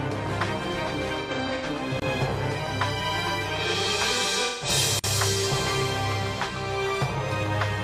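AAC frame loss with concealment appears from 1.20 to 1.66 s. Several decoder frames go missing, scattered across about 430 ms with roughly 256 ms lost in total, and the decoder patches each gap from the last good spectrum, giving smeared, noisy, phasey stretches, the longest about a tenth of a second. A block of digital silence follows at 2.00 to 2.02 s: a 23 ms run of zeros, which fits a 1024-sample buffer left unfilled, cutting in and out abruptly as a short hole. The same concealment returns from 4.44 to 4.68 s, about 171 ms of lost audio heard as another smeared patch. A second block of digital silence, 46 ms long at 4.99 to 5.04 s and consistent with a 2048-sample buffer, cuts in hard and is heard as a short hole.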